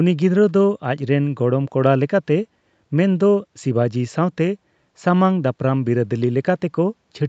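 No technical faults occur in this speech, so there are none to describe in time order.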